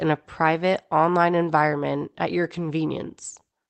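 Speech whose pace wavers slightly, with small, unevenly spaced hiccups from 0.18 to 3.41 s, adding roughly a tenth of a second overall. These are repeated timing corrections, with the receiver stretching the audio to about 98% speed by repeating short pieces. Underneath is clock drift between sender and receiver: the sender's clock runs roughly 3% slow, so the jitter buffer keeps draining and needs padding. The call codec, which sounds like Opus, limits the top end to about 8 kHz.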